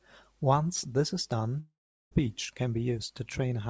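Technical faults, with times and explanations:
1.60–2.13 s, long network dropout: Just after "this is", the sound smears into a fading buzz, then about 0.4 s of silence. About 0.52 s of audio never returns. The likely cause is packets that never arrived, so the receiver stretched the last sound, then gave up.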